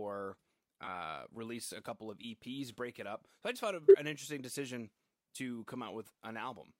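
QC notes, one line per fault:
0.85–0.96 s, corrupt frame concealed: about 116 ms affected. The decoder hid a damaged stretch, which fits roughly five AAC frames.
3.84–3.95 s, corrupt frame concealed: about 108 ms affected. The decoder covered bad data, likely four frames, with silence or a scrambled spectrum.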